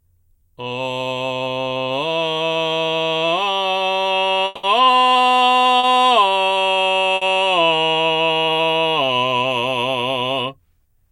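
From 4.45 to 4.65 s the music is replaced for about 180 ms by a continuation of the preceding sound that decays without dropping to silence, then resumes further on with that stretch missing. This is likely a long network dropout, where the receiver extrapolated while nothing arrived.

At 5.79 to 5.85 s a short concealed packet loss leaves a brief smear. Roughly 40 ms never reached the decoder, and the receiver filled the gap by extending the last sound before blending back into the actual signal.

At 7.15 to 7.23 s a burst of packet loss removes about 60 ms. The receiver holds and fades the previous sound across the gap, so the music briefly sustains unnaturally, then continues past the lost section.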